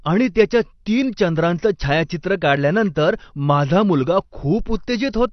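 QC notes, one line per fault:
Throughout, AAC compression: the speech sounds dull and smeared, with nothing above about 6.1 kHz. Sibilants have a fizzy, warbling edge. This is likely low-bitrate AAC-LC, which fits roughly 32 kbps, cutting the top band and coarsely quantising what remains.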